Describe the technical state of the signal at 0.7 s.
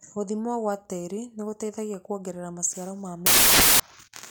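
At 0.7 s the signal is intact, with no dropout, clipping, distortion or other fault audible at that moment.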